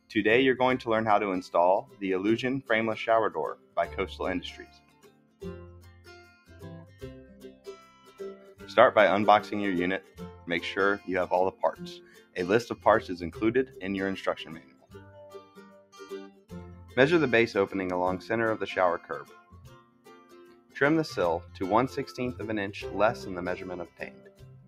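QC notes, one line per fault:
Throughout: noise suppressor applied to music or sounds. A speech-oriented noise suppressor stays active across the whole clip and keeps treating sustained, steady content as background noise. Its gain rides up and down by around 15 dB as it decides what to keep. Onsets pass largely intact, but held tones and decays are pulled down, so the sound pumps and thins rather than sitting at a stable level.
1.82–2.02 s, 3.55–3.77 s, 4.58–8.62 s, 10.01–12.85 s, 14.42–16.97 s, 19.0–20.76 s, 23.86 s to the end: sound cut by the noise suppressor. In each span the suppressor clamps down harder, with the deepest drops about 12 to 15 dB. The two early dips are brief. The longer stretches, especially 4.58–8.62 s, keep sustained or fading material sunk for seconds at a time. Tails are cut short because the processor reads their steadiness as noise, while any sudden attacks still come through.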